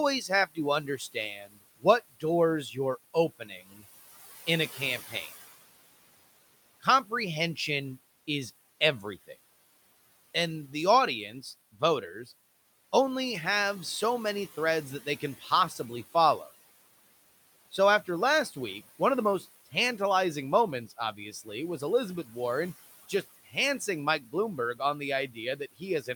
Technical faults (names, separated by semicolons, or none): speech cut by the noise suppressor